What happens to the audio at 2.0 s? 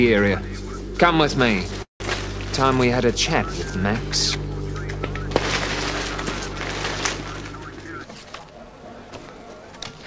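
The audio stalls in a call audio freeze from 1.82 to 2.02 s. Incoming packets were likely held up, so the jitter buffer ran dry. The receiver stretches the last sound into a fading buzz or hiss for a moment, and then there is about 130 ms of silence. The audio then resumes exactly where it stopped. Nothing is lost, but a gap of about 177 ms has been inserted, and everything after it arrives that much later.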